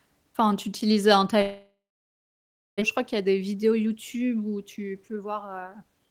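A long network dropout is the likely cause of the break from 1.41 to 2.84 s. The last sound is drawn out into a fading buzz, about a second of silence follows, and when audio returns nearly a second of speech is missing.

Jitter buffer speed-up follows at 3.00 to 3.87 s and again at 4.57 to 6.07 s. With extra delay built up, the receiver trims short pitch-period pieces, so speech runs 9% and then 17% fast at unchanged pitch, sounding hurried.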